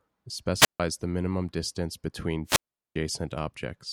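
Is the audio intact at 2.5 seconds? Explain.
No. Right after "the minimum distance between", a wireless microphone squelch dropout runs from 2.45 to 2.96 s. The radio link from an analogue FM microphone weakens, hiss and static climb briefly, and the receiver's squelch then mutes the output for about 0.40 s before the speech returns. That rising hiss before the silence distinguishes it from a digital packet dropout, which cuts straight to silence or a glitch with no noise build-up beforehand.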